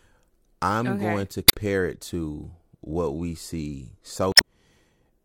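A short glitch breaks into the speech at 1.45 to 1.55 s, right after "I'm okay going to" and before "it to what we", and a second one follows at 4.32 to 4.44 s, just after "to what we see". Both come from damaged data in a compressed stream. Corrupted bytes make the decoder misread those frames and lose sync, so the audio breaks up briefly until it locks onto the next valid frame header.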